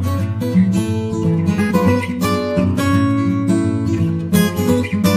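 Compressed frames skipped at 1.70 to 1.72 s: the audio lurches forward. Whole frames of the encoded stream never reached the output, either because they were missing or because the decoder discarded them as corrupt, so playback jumps ahead by a whole number of frames. The jump suggests about three frames of roughly 23.2 ms, about 70 ms of lost audio.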